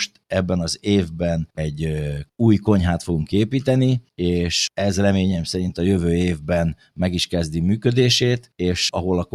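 The noise suppressor misjudged part of the signal as background noise and applied extra attenuation between 6.75 and 6.99 s. That is sound cut by the noise suppressor: for a total of roughly 150 ms within that span, the audio drops by up to about 11 dB below its surrounding level. Sustained or decaying material sinks in level and tails are clipped short, while sharper onsets largely survive the gating.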